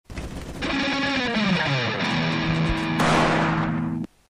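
Imaging from linear upsampling runs through the whole clip. The rate was doubled from 24 kHz to 48 kHz by joining neighbouring samples with straight lines, and that crude interpolation filters poorly. The upper part of the original band sounds dulled, and a mirrored copy of the spectrum remains between 12 kHz and 24 kHz, roughly 35 dB below the signal. This image is audible as a faint metallic shimmer on the brightest, hissiest sounds.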